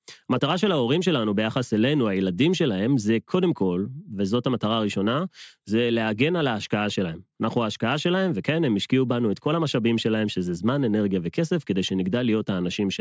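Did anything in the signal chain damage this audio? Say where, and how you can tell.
No, nothing in the chain audibly damaged this speech recording, and the signal carries no dropouts, clipping, distortion or timing disturbances at any point.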